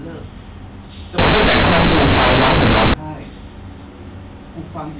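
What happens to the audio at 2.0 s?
At 2.0 s the A-law G.711 bytes are being read as linear 8-bit samples with no expansion, from 1.18 to 2.94 s. Each sign change swings half the output range, so quiet speech matches loud speech, giving harsh, very loud buzzing distortion and heavy noise in pauses.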